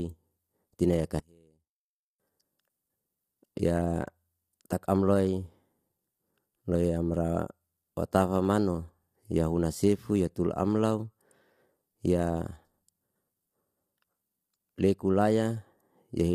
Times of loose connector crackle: none

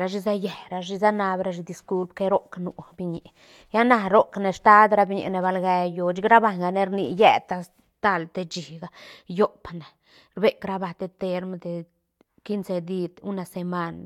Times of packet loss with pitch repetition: none

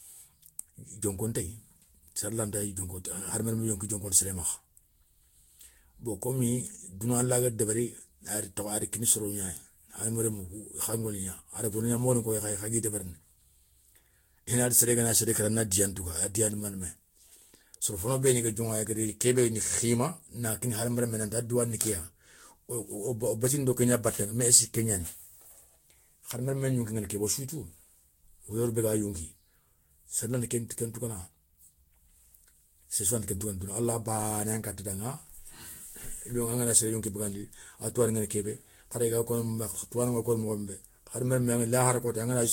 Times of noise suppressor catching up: none

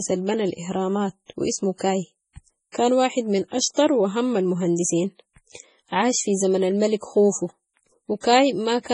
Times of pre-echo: 2.72-2.75

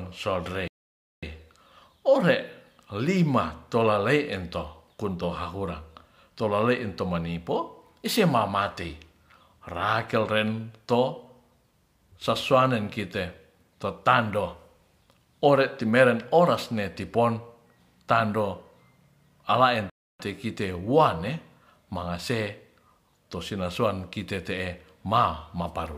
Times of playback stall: 0.68-1.23, 19.90-20.19

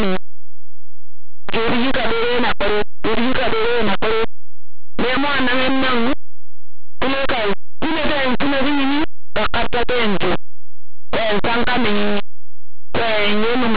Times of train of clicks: none

